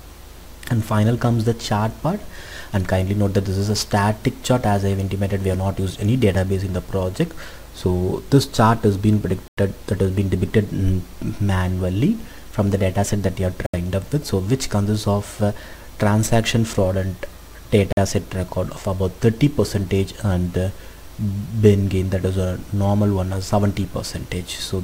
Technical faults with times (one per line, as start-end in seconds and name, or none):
9.48-9.57 Bluetooth stall
13.66-13.74 Bluetooth stall
17.92-17.97 Bluetooth stall